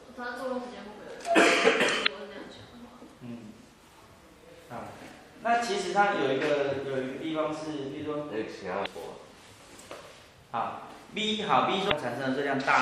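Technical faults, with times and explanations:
Throughout, MP3 compression: the treble stops abruptly at a fixed ceiling, and weak detail flickers in and out, giving a watery, swirling texture with metallic chirps on bright, hissy sounds and softened attacks. The likely cause is an encoder running short of bits, which fits a 64 kbps MP3 stream. It cuts the treble and drops quiet frequency lines frame by frame. Unlike stream damage, this is constant rather than confined to brief bursts.
2.03–2.08 s, 8.82–8.86 s and 11.88–11.92 s, damaged data in a compressed stream: each is a sudden squawk or blip of about 45 to 50 ms. Part of the encoded data was wrong, so the decoder misread or discarded those frames, lost sync, and jumped ahead to the next valid frame header. These are isolated, sharp events separate from the steady swirl of the compression.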